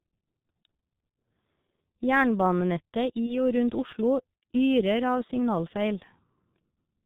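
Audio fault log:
Throughout: G.723.1 codec at 6.3 kbit/s, heavy damage; nothing above 4 kHz survives and the slow voice model leaves the speech muffled, hoarse, consonants smeared.
Throughout: sample clock jitter of a microsecond or two, adding faint hiss and roughness about 45 dB below the signal, strongest on loud, bright sounds, absent in pauses.
3.26–3.38 s: VoIP packet loss concealed by the speech codec; one 30 ms frame lost, decoder extrapolated from its last pitch and filter with fading gain, voice stays weak or distorted afterwards.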